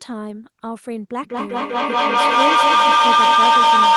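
From 1.23 s to the end, a feedback howl builds. A microphone is picking up a loudspeaker carrying the same call, and each trip round the loop adds level. The tone settles near 1 kHz, the loop repeats roughly every 200 ms, and the howl peaks about 13 dB above the speech.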